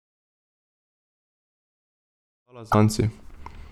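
At 2.71 s the speech jumps forward and the next 40 ms, from 2.71 to 2.75 s, come out garbled instead of as continuous sound. That is roughly one and a half MP3 frames of 26.1 ms, and the likely cause is a broken MP3 bit reservoir. Frames were cut from the stream, so the first frame after the gap looks back for its borrowed data and decodes bytes that belonged to another frame. On a spectrogram this shows as a narrow vertical band whose texture breaks from the harmonics on either side. The waveform has a short disturbed patch at the join. The fade-in that rises from around 2.5 s to 3.61 s passes through this spot.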